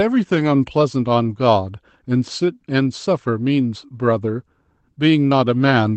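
A lost packet rebuilt from error correction at 0.35 to 0.41 s: about 40 ms was replayed from low-bitrate copies in the following packets, fitting two lost packets, so the speech roughens and turns noisier instead of dropping out.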